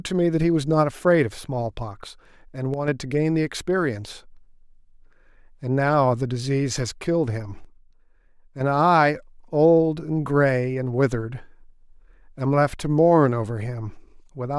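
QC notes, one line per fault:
2.74–2.88 s and 7.65–8.60 s, one channel drops out: the likely cause is one side of the stereo feed briefly losing signal, first for about 0.14 s and then for nearly a second. Once the two channels are summed to mono, the speech shared by both sides falls abruptly by about 6 dB, so the level dips at each point and recovers just as suddenly. Anything carried only in the missing channel vanishes for those stretches.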